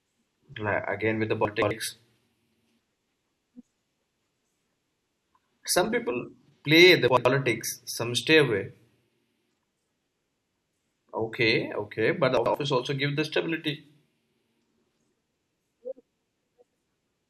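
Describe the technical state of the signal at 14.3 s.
At 14.3 s the speech signal is intact, with no dropout, distortion or other fault to be heard at that point.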